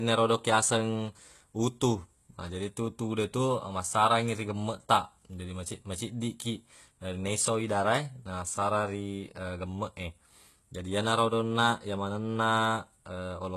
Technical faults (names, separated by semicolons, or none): HE-AAC compression